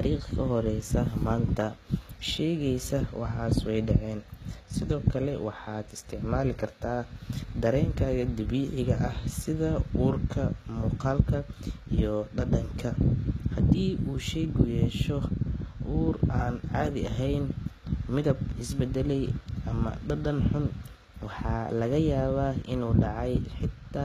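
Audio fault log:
Throughout, HE-AAC compression, plainly audible: the treble over the speech sounds bright but synthetic, with s sounds coming out gritty and lispy and a metallic edge above the crossover, where rebuilt harmonics fail to line up with the real ones below. Nothing is present above about 14.9 kHz. This is likely a low-bitrate HE-AAC encode, around 20 kbps, coding only the lower band and regenerating the upper band by copying it upward under a coarse envelope.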